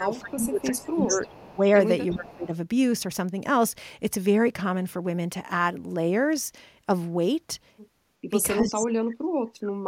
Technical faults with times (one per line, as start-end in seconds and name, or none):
0.00-1.59 speech suppressed in double talk
0.03-1.58 echo leak
2.12-2.34 echo leak
2.13-2.53 speech suppressed in double talk
8.25-9.88 speech suppressed in double talk
8.80-8.87 echo leak